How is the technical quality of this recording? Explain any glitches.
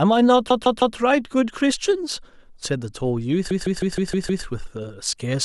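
The recording has two stutters caused by repeated frames. From 0.50 to 0.97 s and from 3.50 to 4.44 s, the same 0.16 s block of compressed audio, which fits about six frames, replays three and then six extra times. Each restart sounds like a rhythmic stutter. Unlike a dropout, nothing goes missing. The speech just runs longer, by about 0.47 s and 0.94 s.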